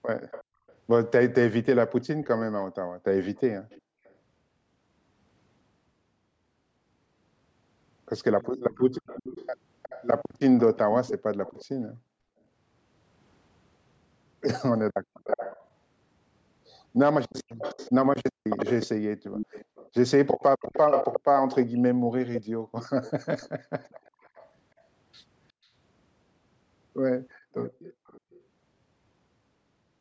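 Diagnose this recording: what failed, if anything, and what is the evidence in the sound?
Echo leak at 0.31–4.14, 8.71–11.65, 15.24–24.5 and 27.65–28.42 s: a faint to fairly strong copy of the speech trails 362 ms behind. This is likely residual loudspeaker pickup that the far end's echo canceller missed during call processing.

Background gated by the echo canceller at 0.58–0.63 s (about 23 dB), 3.81–3.96 s, 14.91–15.24 s, and intermittently across 19.2–27.54 s: the room sound drops about 40 dB while the canceller suppresses the microphone.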